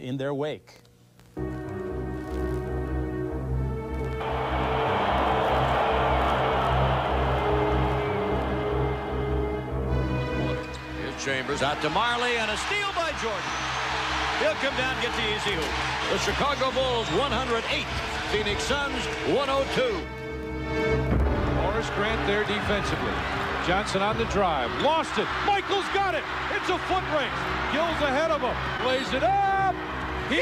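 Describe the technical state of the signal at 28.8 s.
A brief smear or wobble sits between 28.77 and 28.81 s, a short concealed packet loss. About 20 ms of audio never arrived in time, and the receiver bridged the gap by extending the preceding sound for roughly 12 ms before blending back into the real signal.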